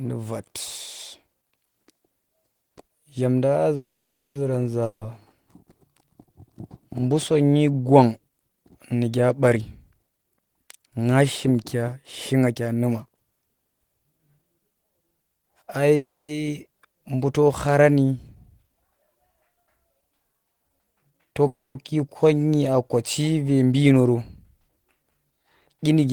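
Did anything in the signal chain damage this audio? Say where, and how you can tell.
Yes. There are three call audio freezes, at 3.75–4.37 s, 15.96–16.31 s and 21.47–21.77 s. Each is likely a network stall that emptied the jitter buffer. The last sound continues as a fading buzz, then goes silent for 0.5 s in the first freeze and 0.19 s in the others. On a spectrogram this shows as smeared harmonics followed by a blank band. The speech then resumes intact, 0.6, 0.33 and 0.28 s later.

A long network dropout follows at 4.85–5.07 s, likely lost packets on the network path. The receiver fills the gap with a 160 ms fading buzz, with no fully silent stretch. When the speech returns, 160 ms of it is missing. On a waveform the envelope fades out where the lost section begins.

There are three jitter buffer speed-ups, all in the buffer stage: 9.56–13.16 s at 117% speed, 21.02–21.42 s at 128%, and 23.65–25.33 s at 109%. 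The receiver removes short pitch-period pieces to shrink an overfull buffer, around 0.7 s in the first stretch. The speech sounds hurried at unchanged pitch, and a spectrogram shows compressed syllables with harmonics at their normal height.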